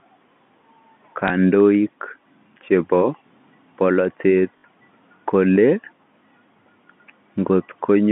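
At 1.28 to 1.30 s and 4.58 to 4.64 s, packet loss with the last packet repeated shows as a blip and a stutter. The brief first event fits one lost 20 ms packet. The longer second event fits three, and its 60 ms run buzzes at 50 Hz. Unlike a silent dropout, there's a robotic repeat.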